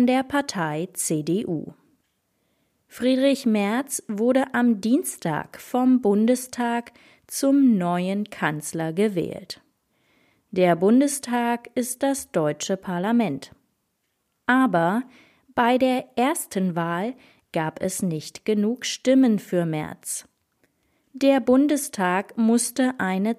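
No technical faults are audible.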